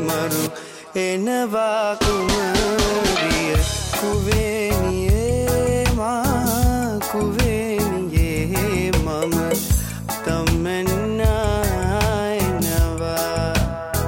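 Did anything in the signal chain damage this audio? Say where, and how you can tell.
No, nothing in the chain damaged it.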